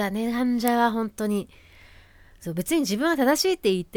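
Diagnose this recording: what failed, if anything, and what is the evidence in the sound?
A single sharp snap lands at 0.68 s over the speech, peaking around -5 dBFS: an electrical switching spike, likely a nearby switch or discharge arcing into the analogue wiring. The waveform shows one isolated needle; the spectrogram shows a thin vertical stripe spanning all frequencies.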